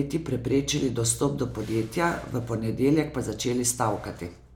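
Nothing technically wrong turns up in this short bit of speech; there's no fault to point to anywhere along it.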